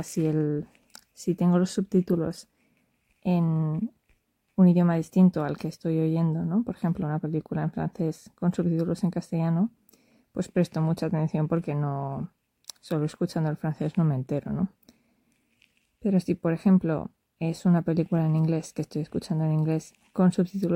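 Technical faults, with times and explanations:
No technical faults detected anywhere in the audio.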